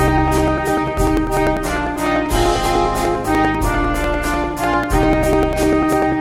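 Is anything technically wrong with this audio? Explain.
Yes. From 0.08 to 6.12 s there are periodic USB or driver dropouts: something stalls the audio path every 0.099 s, and about a millisecond of audio is skipped each time. Around seventy such gaps produce a steady ticking, roughly ten per second, wherever there is signal.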